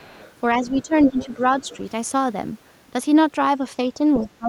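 A faint second voice sits under the speech from 0.0 to 0.34 s, well below it, around 30 dB down. It is other side's voice leaking through, likely residual loudspeaker echo that the echo canceller left in the microphone signal. From 0.55 to 0.93 s the talker's speech dips by about 10 dB while a slightly stronger leak, about 25 dB down, returns at 0.64 to 0.82 s. This is speech suppressed in double talk: with both sides active, the canceller likely turned everything down. The strongest leak, only about 15 dB below the speech, runs from 1.06 to 1.77 s, with the talker again pulled down about 10 dB between 1.09 and 1.4 s. From 4.2 s to the end the speech drops more deeply, around 20 dB.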